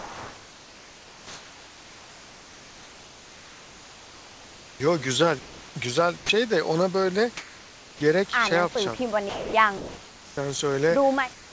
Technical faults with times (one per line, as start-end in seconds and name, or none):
0.00-4.80 comfort noise in place of the background
5.39-5.75 comfort noise in place of the background
6.17-6.29 sound dropped by the voice detector
7.37-8.00 comfort noise in place of the background
9.29-9.53 sound dropped by the voice detector
9.77-10.37 comfort noise in place of the background
11.33-11.53 comfort noise in place of the background